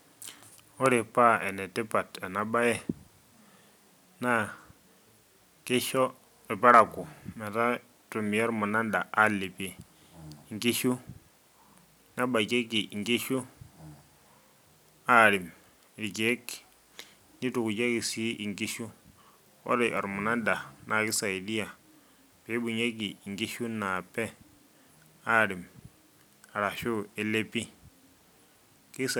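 No technical faults are audible in this speech.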